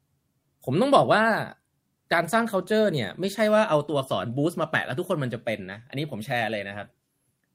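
No technical faults are audible.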